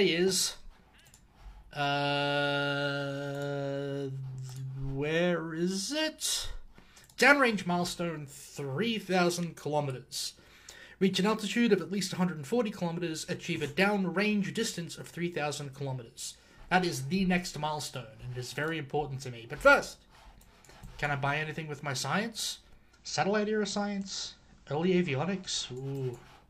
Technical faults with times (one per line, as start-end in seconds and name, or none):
22.88-25.85 digital radio blending to analogue